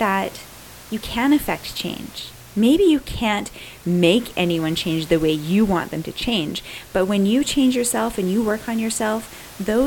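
No technical faults are audible.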